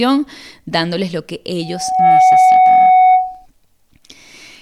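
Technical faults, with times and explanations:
1.61–3.46 s, loudspeaker feedback squeal: after "dándoles lo que", a 743 Hz tone swells over roughly half a second to about 10 dB above the speech, where the microphone-to-loudspeaker loop gain exceeds one. A spectrogram shows one bright horizontal line, and the waveform a swelling envelope.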